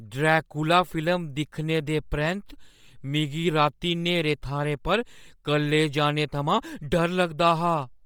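Throughout the speech, the upper range sounds breathy and grainy with heavy damage, though content still reaches 20.2 kHz. The likely cause is Bluetooth LC3 compression, which discards upper-band detail and fills it with noise. The damage points to about 32 kbps with 10 ms frames.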